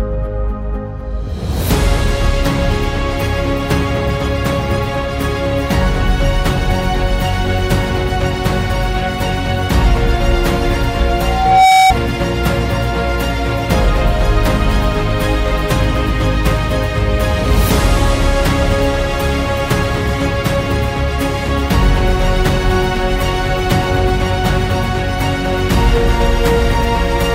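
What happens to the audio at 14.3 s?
Nothing goes wrong at 14.3 s; the audio plays through that moment intact, with no dropout, click or other fault.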